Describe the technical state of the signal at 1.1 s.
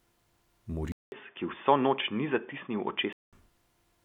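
At 1.1 s you're inside a stretch from 0.92 to 3.33 s where the sound goes dull and boxy, with nothing above 3.5 kHz and faint new background noise underneath. It opens with a 200 ms gap, likely an input switched to a poorer device.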